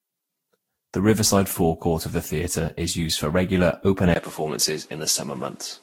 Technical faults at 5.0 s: generation loss; input switched to a poorer device

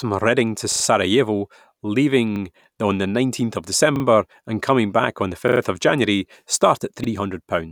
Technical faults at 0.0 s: none

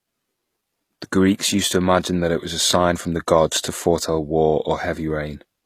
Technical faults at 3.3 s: HE-AAC compression

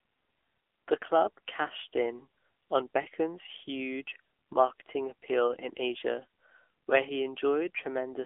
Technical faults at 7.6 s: AMR narrowband mobile codec

